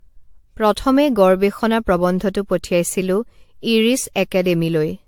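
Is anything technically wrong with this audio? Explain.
Yes. Generation loss runs throughout the speech: the audio was likely decoded and re-encoded about five times through a lossy codec, consistent with 96 kbit/s AAC-LC, each pass requantising on a shifted frame grid. Noise and spectral holes accumulate, giving a swirly, hollow, smeared sound with blurred attacks and nothing above 19.3 kHz.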